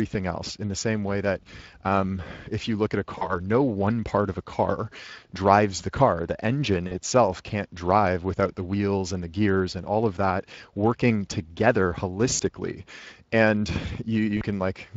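It's a speech recording squeezed through the Speex codec, which fits a mid-rate setting around 20 kbps, and you can plainly hear the hoarse, noisy CELP grain on it. There's also VoIP packet loss concealed by the speech codec at 3.17–3.40, 6.87–6.98, 12.33–12.42 and 14.37–14.44 s, where the sound smears into a stretched, fading fill. That fits two or three lost 20 ms frames each time, with the decoder taking a moment to recover.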